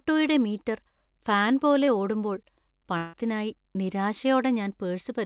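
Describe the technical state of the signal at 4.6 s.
At 4.6 s the speech is intact, carried through the call path with its G.711 A-law coding and nothing above 4 kHz.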